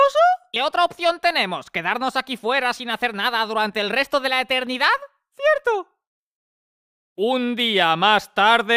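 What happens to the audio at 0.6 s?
At 0.56 s, compressed frames are skipped: the audio jumps ahead about 150 ms, several whole 32 ms frames, leaving an abrupt join where the missing audio was cut out.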